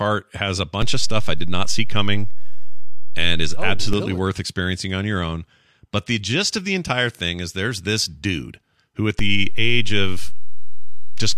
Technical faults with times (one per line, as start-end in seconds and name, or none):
0.82-3.93 DC step
9.19-11.38 DC step